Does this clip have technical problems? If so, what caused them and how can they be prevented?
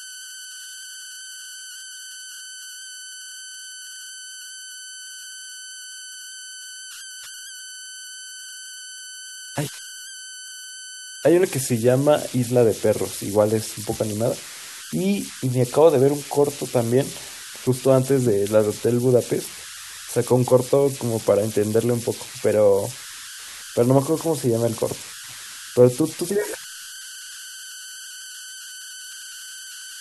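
Yes. Converter idle tones run through the whole clip: a whistle sits around 1.5 kHz in the pauses between phrases, and the quieter stretches of speech have a grainy texture under them, at about 16 dB below the signal. That's a delta-sigma converter with no dither settling into repeating bit patterns whenever its input gets small, and those patterns come out as tones. Adding proper dither to the converter, or using one with built-in dither, breaks up the patterns and stops it.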